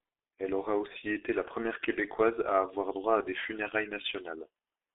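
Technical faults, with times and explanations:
Throughout, G.723.1 codec: the speech is dull and muffled, with a rough, hoarse edge and smeared consonants, pointing to G.723.1 at around 6.3 kbit/s with heavy damage. The codec sums up the voice in 30 ms frames and rebuilds it from a coarse model that lags behind fast changes, so sibilants and plosives blur. On a spectrogram, energy sits between 200 Hz and 3.5 kHz with nothing above, and harmonics look grainy and blocky in time.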